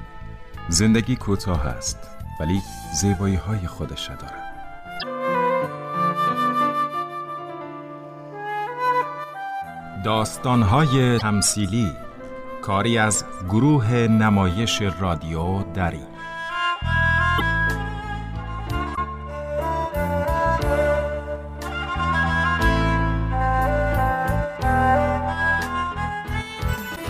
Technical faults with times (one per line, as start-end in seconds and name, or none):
4.98-5.04 damaged data in a compressed stream
11.17-11.22 damaged data in a compressed stream
17.36-17.42 damaged data in a compressed stream
18.93-18.98 damaged data in a compressed stream
26.92-26.98 damaged data in a compressed stream